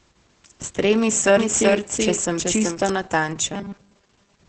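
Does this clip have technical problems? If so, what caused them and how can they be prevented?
Yes, three of them.

The whole clip has heavy Opus voice compression. The speech is muffled and a bit hoarse, with nothing above 9 kHz, which fits a SILK-mode bitrate around 10 kbps. Giving the encoder more bitrate would fix it.

From 1.37 to 2.89 s there's a doubled audio track: a dry copy about 5 dB quieter trails the original by roughly 0.4 s, likely from a second, slower capture path. Make sure only one path feeds the mix.

From 3.54 s to the end the sound turns into a rigid 200 Hz robotic buzz from repeated short buffers. The software is looping roughly 5 ms chunks while most of the real audio gets skipped, likely because data arrives too slowly. Bigger buffers or a steadier feed would prevent it.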